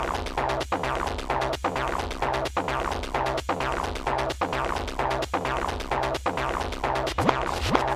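No technical faults are audible.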